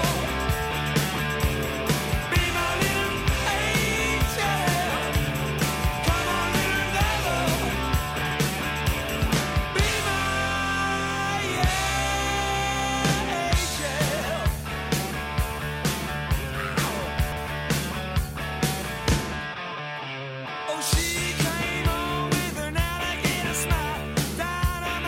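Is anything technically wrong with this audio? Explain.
Yes. Chunks out of order at 8.22–8.31 s and 17.18–17.37 s. A roughly 46 ms chunk plays late, one chunk late first, then three chunks late. Nothing is lost. The wrong order leaves three hard joins, heard as a brief jumbled stutter.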